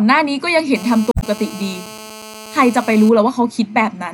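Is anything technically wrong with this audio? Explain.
Yes, there are two faults. From 0.76 s to 3.09 s there is GSM phone buzz: a nearby 2G handset on a call transmits bursts about 217 times per second, and the audio circuitry rectifies them. The result is a steady, harsh 217 Hz buzz, rich in harmonics, about 18 dB below the speech.

From 1.11 s to 1.24 s there is damaged data in the compressed stream. Corrupted bytes there cause the decoder to misread or discard frames and lose sync while it hunts for the next valid frame header. This produces a brief chirp, squawk, click or short hole that is unrelated to the speech.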